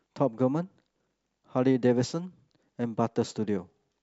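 Nothing in the recording stood out as a fault on listening.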